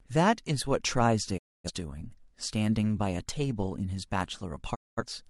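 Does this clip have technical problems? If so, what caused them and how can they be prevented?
Yes. The speech drops out twice with digital broadcast dropouts, from 1.37 to 1.70 s and from 4.74 to 5.03 s. Each time the sound fades to silence over about 20 ms, and whatever was sent during the gap is gone when the audio resumes. The receiver lost lock or rejected corrupted frames and muted until valid frames arrived. The missing spans of roughly 256 ms and 213 ms point to about six and five lost frames respectively. Prevention: ensure adequate signal strength and margin at the receiver through better antenna placement or a stronger multiplex, and use error protection or a wired or IP feed where reception is marginal.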